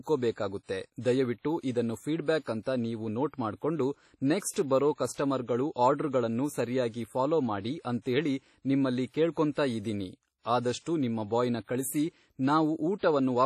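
WMA compression, throughout: the speech has a ringing, washy quality with hiss that swells and fades with the signal, and nothing above 15.7 kHz. It is likely from a WMA 1 encoder at a low bitrate, around 32 kbps. Its long transform blocks spread quantisation noise over tens of milliseconds and zero out weaker components.

Pre-echo, from 4.51 to 4.56 s, just before "ಬರೊ ಕಸ್ಟಮರ್ಗಳು ಆರ್ಡ್ರಗಳನ್ನು": a brief hiss runs about 52 ms ahead of a sharp onset, which sounds softened and smeared. The codec spread noise sized for the loud attack across its whole block, filling the quiet gap before it.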